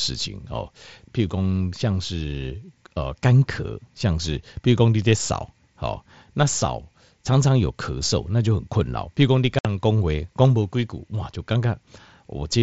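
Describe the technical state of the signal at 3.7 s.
At 3.7 s the speech is intact, with no fault at that moment.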